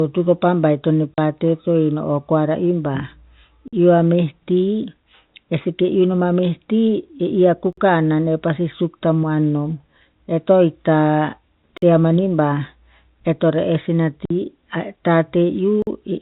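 Speech over a telephone-band G.711 path, with nothing above 4 kHz. Packet loss filled with silence cuts hard-edged holes at 1.14 to 1.18 s (40 ms) and 14.25 to 14.30 s (50 ms), which fits four and five lost 10 ms packets. A gap between chunks, where the audio was delivered in 4-second blocks and silence was left at each join, interrupts the sound for about 48 ms at 3.68, 7.73, 11.77 and 15.82 s, giving evenly spaced dropouts.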